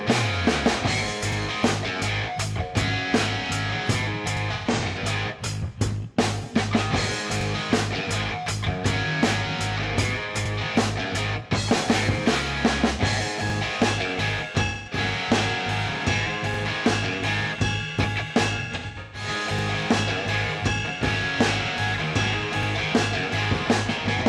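At 1.32 s the first of eight overlapping-chunk joins appears, recurring at 4.37, 7.41, 10.46, 13.50, 16.54, 19.59 and 22.63 s. The audio was handled in 3 s chunks, each starting 44 ms before the previous one ended, so that sliver plays twice at every seam. The result is a brief stutter or click on a strict, even beat. This regular repetition of real content separates it from the irregular, smeared dropouts described below.

From 4.53 to 4.99 s comes the first AAC frame loss with concealment: about 0.3 s of frames went missing, scattered across roughly 0.43 s, with the longest gap around 0.15 s. The decoder patched each hole by extrapolating the last good spectrum, producing a phasey, noisy smear rather than a repeat. Similar patches follow at 14.65 to 14.97 s (about 0.21 s lost), 18.62 to 19.28 s (about 0.38 s lost over 0.51 s), and a short one at 24.17 to 24.24 s.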